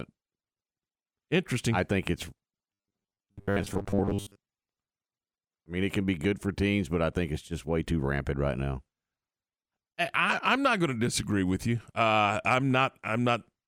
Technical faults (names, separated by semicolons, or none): robotic sound from repeated short buffers